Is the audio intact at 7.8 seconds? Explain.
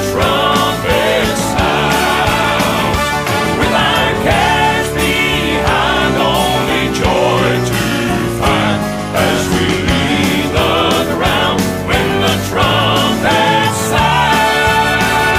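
No. From 7.71 to 10.08 s, a drift correction step (likely clock-matching software slowing playback 5.3%) drops pitch about 95 cents, shifting spectrogram harmonics down until they snap back.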